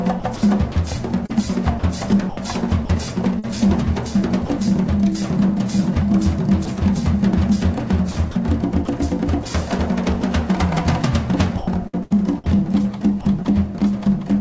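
From 0.20 to 3.45 s the sound is chopped by the voice detector, likely a sender-side detector switching sending off and on, so about 375 ms in total becomes comfort noise. A spectrogram shows the signal broken by flat, featureless noise patches. At 4.45 to 4.49 s the sound is dropped by the voice detector, likely because the sender took it for background. A 40 ms gap is filled with steady low-level noise, which shows on the waveform as a short, even band. The same dropout recurs for 20 ms each at 6.65, 9.43 and 10.21 s. Chopping returns at 8.11 to 8.87 s (100 ms replaced), 11.57 to 12.56 s (252 ms) and 13.21 to 13.81 s (75 ms). Each stretch shows the same alternation between real content and smooth synthetic fill, and within these stretches the spectrogram shows nothing above 8 kHz, consistent with the G.722 call path at 64 kbps.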